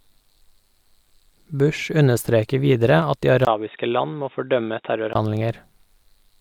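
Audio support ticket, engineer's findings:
Speech dull and boxy 3.45 to 5.15 s. Likely input switched to a poorer device: band stops at 3.8 kHz, level down about 5 dB, new noise floor about 50 dB under signal, 20 ms gap at 3.45 s. Gap, changed noise and level separate it from a plain low-pass or codec squeeze. Full band back at 5.15 s.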